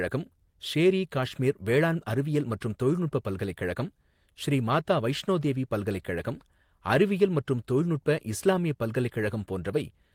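Nothing in the recording stands out as a technical fault, so there's nothing to point to at any moment in the speech.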